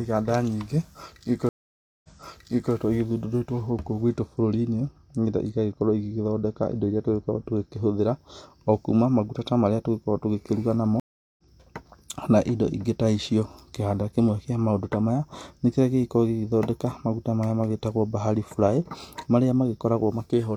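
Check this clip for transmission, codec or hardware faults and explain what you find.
Yes, three faults are audible: two stream reconnects and one stretch of wrongly applied de-emphasis.

Stream reconnect, 1.49 to 2.73 s and 11.00 to 11.42 s. The connection dropped, the player fell silent, then reopened the stream and restarted decoding mid-flow. The first gap lasts about 0.55 s, and the speech resumes about 0.7 s earlier, so a short stretch is heard twice. The second gap, right after "tũgĩkĩruga namo", lasts about 0.38 s, and the speech picks up roughly 0.4 s later, so material is lost. An ordinary packet dropout would resume where it left off. These jumps in the timeline show a fresh connection.

De-emphasis applied wrongly, 3.70 to 7.99 s. A treble-reducing curve intended to reverse pre-emphasis was applied to audio that had none, or was applied twice. The top end is about 8 dB down at 10 kHz relative to 1 kHz, so the speech turns dull and muffled for those four seconds. 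Unlike a low-pass filter, which cuts off sharply above a set frequency, this loss slopes gently and continuously across the upper range.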